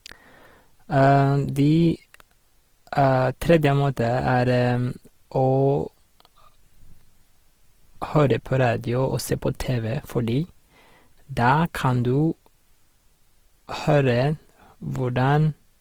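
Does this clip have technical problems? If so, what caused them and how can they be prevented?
Yes. Opus compression damage runs through the whole speech clip. The sound is grainy and rough, and it still extends to about 20.4 kHz. This is likely Opus's CELT mode running short of bits, which fits a bitrate near 16 kbps. With so few bits, the codec keeps each band's energy but replaces fine detail with folded or noise-filled content. Encoding at a higher Opus bitrate would prevent this.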